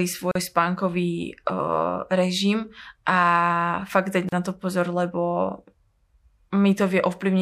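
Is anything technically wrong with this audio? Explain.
Yes. There are two gaps at a join of encoded pieces, at 0.31 to 0.35 s (about 39 ms) and 4.29 to 4.32 s (about 36 ms). The speech was encoded in separate pieces and joined untrimmed. Encoder delay and padding leave brief silences with smeared edges before the speech resumes.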